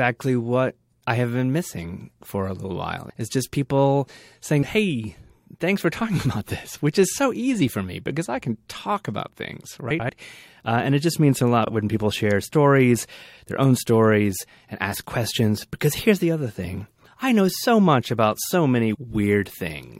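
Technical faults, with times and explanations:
9.90–10.10 s, frames out of order: two neighbouring blocks of about 93 ms play swapped. The speech flutters. No time is lost.
11.65–11.70 s, frames out of order: after "it just means a", two 23 ms slices swap before "when people share stories". This fits single frames exchanged. It causes a brief garbled flutter.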